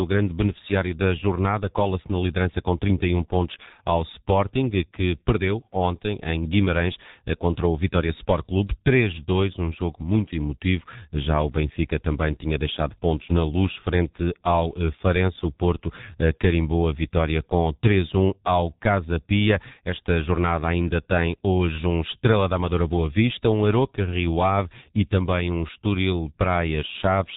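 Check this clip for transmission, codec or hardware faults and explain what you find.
One codec fault runs through the whole speech clip: G.723.1 codec damage, and it is heavy. Nothing reaches above about 3.8 kHz, so fricatives and plosives lose their high-frequency energy and consonants smear together. The codec models the voice from 30 ms frames and updates that model slowly, which at a rate consistent with roughly 6 kbit/s leaves the speech muffled and hoarse, with transitions between sounds blurred.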